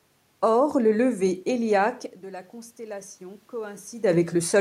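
Right after "le lever héliaque", at 2.21 s, the input falls by about 16 dB, around when the talker moves back, and the automatic gain rising kicks in, slowly adding about 4 dB until 4.46 s, so voice and room noise swell up together.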